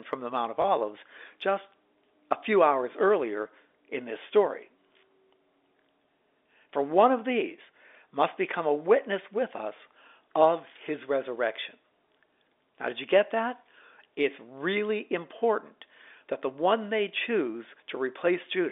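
At 0.62 s there is a single instance of packet loss with the last packet repeated. A 20 ms stretch of audio went missing, and the receiver filled the gap by playing the preceding chunk a second time, which fits one lost 20 ms packet. The single repeat comes through as a brief blip. The telephone-band G.711 coding, passing roughly 300 Hz to 3.6 kHz, carries through the event.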